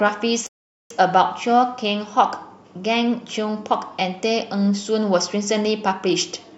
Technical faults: rebuffering stall

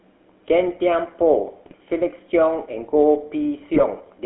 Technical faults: GSM full-rate codec; GSM bit errors

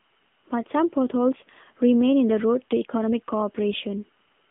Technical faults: AMR narrowband mobile codec

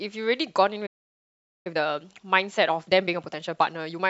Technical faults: playback stall; time-compressed catch-up

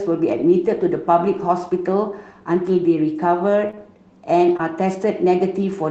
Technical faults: short concealed packet loss

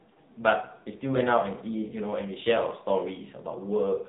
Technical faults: AMR narrowband mobile codec

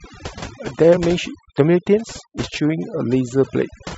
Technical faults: overdone noise removal; compressed frames skipped

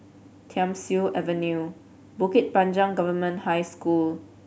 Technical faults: none

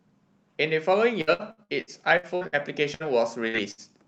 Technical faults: repeated packet loss (robotic sound); burst of packet loss

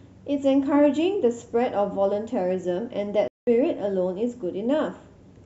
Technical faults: digital broadcast dropout

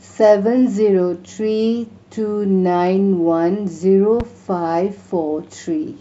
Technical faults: loud pop

